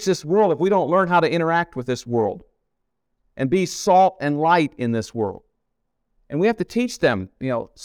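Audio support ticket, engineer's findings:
No faults found in this clip.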